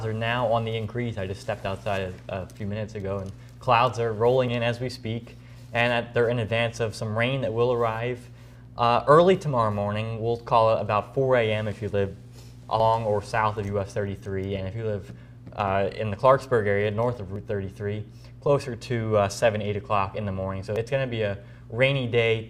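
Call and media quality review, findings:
Abrupt forward jumps in the audio, no gap, at 4.48, 8.76, 12.8, 17.36 and 20.76 s. Most skips are around 40 ms, the 12.8 s one about a tenth of a second, 20.76 s around 70 ms. Likely a dropped buffer (overrun): capture samples overwritten before being read, so the remaining sides join directly.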